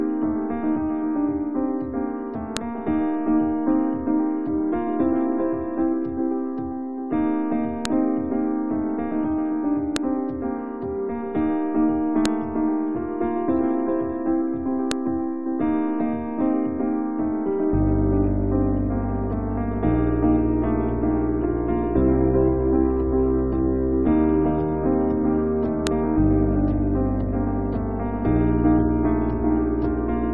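File header played as audio occurs at 2.57, 7.85, 9.96, 12.26, 14.91 and 25.87 seconds, each a sharp, loud click or snap lasting only an instant. At each point a new piece of audio was joined on without its WAV header being stripped, so the header's bytes were read and played as if they were sample values. The resulting burst cuts through the sound abruptly, regardless of what the surrounding audio is doing at that moment.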